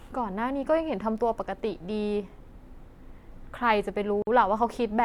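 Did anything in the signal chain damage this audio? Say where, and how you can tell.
Yes. The codec stage left a gap at a join of encoded pieces. The speech drops out at 4.22 s for about 49 ms, then resumes where it stopped. The edges are smeared. Separately encoded pieces were joined untrimmed, so encoder delay and end padding remain.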